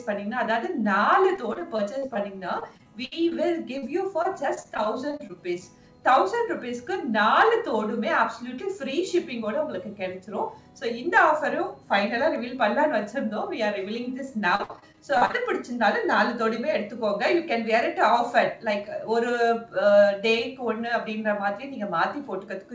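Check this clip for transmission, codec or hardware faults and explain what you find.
Packet loss on the network is the problem: three stretches of repeated loss and one isolated dropout. The sound has no content above 8 kHz, which fits a wideband call codec such as G.722.

Repeated packet loss (robotic sound) occurs at 1.36–3.36 s (13 gaps, longest 62 ms), 4.22–5.31 s (9 gaps, longest 23 ms) and 14.55–15.35 s (11 gaps, longest 58 ms). Packets kept arriving late or not at all, and the receiver extended the previous audio into each hole. Because the holes come in quick succession, the sound turns choppy, with pieces missing. In the last stretch about 35% of the sound is synthetic.

Short concealed packet loss hits at 3.78–3.84 s, where about 40 ms never reached the decoder in time. The receiver filled it by continuing the preceding sound and then blended back into the real signal, leaving a brief smear or wobble.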